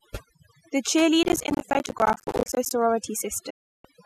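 A noise reduction stage set far too aggressively runs through the whole recording, an overdone noise removal. Any frequency band that comes close to its noise estimate is pushed down hard or removed entirely, and the quieter parts of the speech are stripped away along with the noise. The background collapses into near silence scattered with twinkling specks.

From 1.23 to 2.71 s the processor falls behind its schedule and misses buffer deadlines in quick succession, a processor overload crackle. Each missed buffer is left as a brief hole of silence with abrupt edges. The hole length is roughly ten milliseconds, which fits a buffer of about that size. Dozens of these dropouts pile up across that stretch, and together they produce a gritty crackling tear laid over the speech until the load eases.

Between 3.50 and 3.85 s the receiver loses the digital stream, or its frames stop passing the integrity check, a digital broadcast dropout. 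The decoder mutes until valid frames resume. The sound fades out over about 8 ms, leaving a gap of roughly 0.34 s, which points to a run of around fourteen lost frames. Whatever was sent during that gap is gone, and the speech picks up again after it.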